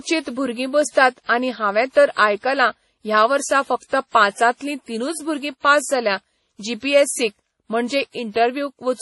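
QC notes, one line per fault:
throughout: transcoding between lossy codecs, nothing above 11.5 kHz and two flavours of swirly smearing stacked together, likely a low-bitrate WMA encode re-squeezed as MP3.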